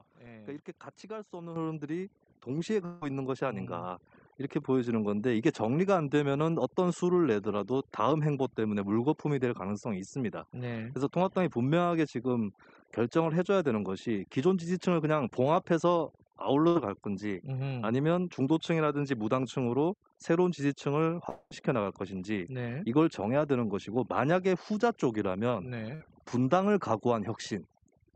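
Throughout the speech, overdone noise removal suppresses frequency bands it mistakes for noise, leaving near-silent gaps with twinkling specks.

At 1.56 s and again at 2.58 s, the microphone volume was stepped up, lifting voice and background together by about 7 dB, then about 4 dB, in abrupt jumps.

From 2.85 to 3.03 s, roughly 160 ms of audio is missing and is filled by a held, fading continuation of the last sound before speech resumes further on. This is likely a long network dropout.

Between 16.67 and 16.77 s, a burst of packet loss removes about 80 ms. The receiver stretches the preceding sound into a brief decaying buzz or hiss, then jumps ahead.

From 21.29 to 21.53 s, a similar but longer gap of about 220 ms is concealed by a fading fill that drops briefly into silence.

At 25.95 to 26.02 s, a second burst of packet loss cuts about 60 ms, heard as a short smeared fade followed by a skip forward.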